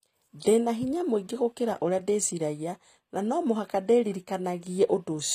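From start to finish the speech has a brittle, synthetic top end: sibilants come out gritty and lispy, and the treble sounds detached from the lower voice, with nothing at all above 15.5 kHz. This is likely HE-AAC compression at a low bitrate, around 24 kbps. Only the lower spectrum is truly coded; the highs are rebuilt by copying lower bands upward, so their harmonics fail to line up with the real ones.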